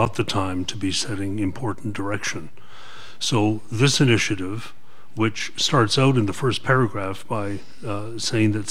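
Listening closely, nothing in the audio stood out as a technical problem at any point.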